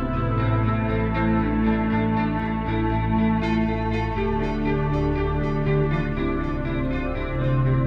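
No technical faults can be heard anywhere in this music clip. There is no moment in the recording that stands out as a problem.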